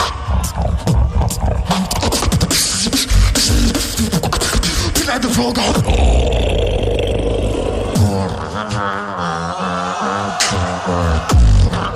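At 8.94 s a single sharp click marks dropped samples: a handful of samples likely went missing, so the waveform leaps to a later value. Unlike a dropout, no sound is audibly lost or silenced; only a thin broadband tick remains.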